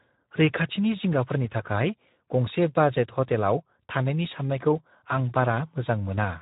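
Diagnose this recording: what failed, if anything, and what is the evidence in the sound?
The failure is at the codec stage: the speech was passed through the Speex codec, a CELP speech coder, at a low rate that fits a setting around 11 kbps. With so few bits to describe the excitation signal, the coder approximates the speech coarsely, and the damage is plainly audible as a rough, degraded texture throughout the clip. Nothing is present above 3.8 kHz, so the sound is confined to a narrow telephone-like band.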